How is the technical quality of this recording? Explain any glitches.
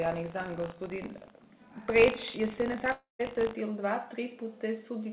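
The recording has two clear faults, both in its first three and a half seconds, heard through a narrowband call-style channel with nothing above 4 kHz.

From 0.00 to 3.54 s there is a steady robotic buzz at 50 Hz that sits on the sound whenever signal is present. This is buffer tearing. The software filling the playback ring buffer and the hardware draining it have drifted out of step, so they cross inside each period. A small sliver of every buffer, a few percent, carries audio from roughly 70 ms earlier, spliced in with hard edges. Those joins repeat fifty times a second, which is where the buzz comes from.

At 2.92 s the sound smears into a decaying buzzy tail, then drops to near silence for around 150 ms before resuming at 3.21 s with about 0.28 s of material simply gone. This is most likely a long network dropout. No packets arrived for that stretch, so the receiver stretched the last audio it had into a fading fill. 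Once that concealment ran out, it went quiet until fresh audio reached it.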